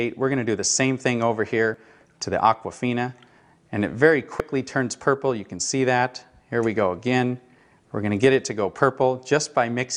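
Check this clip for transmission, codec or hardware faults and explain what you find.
Two brief codec faults appear, both the same kind.

Damaged data in a compressed stream occurs at 1.74 s and 4.40 s. Corrupted bytes make the decoder misread those frames and lose sync until it finds the next valid frame header, leaving a short chirp or blip in the audio each time.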